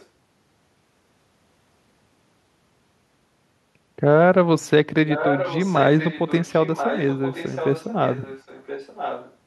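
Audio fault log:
0.00–0.06 s, echo leak: a very faint copy of the sound, about 35 dB down, trails by roughly 1.02 s, likely residue a far-end canceller missed.
5.09–9.35 s, echo leak: a clearer delayed copy, about 10 dB below the direct sound and again about 1.02 s late, likely loudspeaker pickup the echo canceller failed to remove and sent back.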